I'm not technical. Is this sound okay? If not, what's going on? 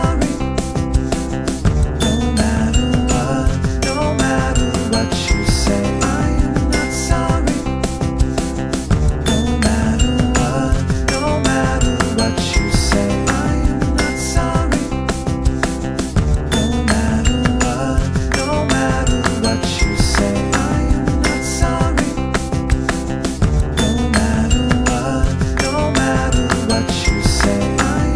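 Yes, this one's fine: nothing in it sounds broken or off, so there's nothing here to worry about.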